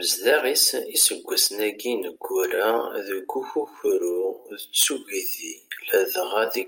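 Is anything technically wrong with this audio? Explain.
Yes. From 2.24 s to the end at 6.68 s there is a time-stretched section: the pace drops to about 0.7 times normal while pitch holds. It was likely processed by repeating short grains, so the speech drags. On a spectrogram the harmonics keep their height but stretch sideways. On the waveform the envelopes widen.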